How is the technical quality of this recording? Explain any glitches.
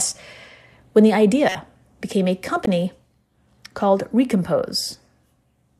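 The speech carries two short corrupt frame decoded glitches. At 1.49–1.56 s, between "when the" and "became a", a few damaged frames play as a brief glitch peaking near -10 dBFS. At 2.64–2.68 s, just after "became a", a louder glitch of a couple of frames peaks near -5 dBFS. Flipped bits made the decoder misplace energy across frequencies. On a spectrogram each glitch is a narrow vertical smear, and the waveform shows a sharp spike.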